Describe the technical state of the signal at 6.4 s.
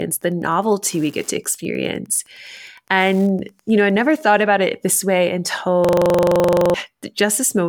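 At 6.4 s the signal is inside a system hang loop (5.85 to 6.74 s, after "it this way"). A frozen driver replays one 42.67 ms buffer, which fits 2048 samples, at 23.4 Hz. The result is a rigid stutter rather than a dropout's silence, and about a second of audio is lost.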